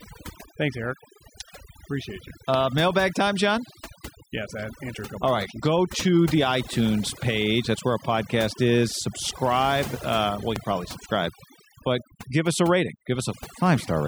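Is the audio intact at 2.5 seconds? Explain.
No. A loud pop occurs from 2.54 to 2.58 s, just before "mailbag time": a single sharp transient, roughly 15 dB above the speech, with the speech continuing underneath. The likely cause is a sudden voltage step or pulse, such as a plug, switch or static discharge, entering the signal chain and being shaped by the circuitry after it. The moment also carries overdone noise removal, present throughout. The noise reducer is set so strong that frequency bands near its noise estimate are pulled down or switched off, taking quieter speech components with them. The background drops and breaks up into twinkling specks.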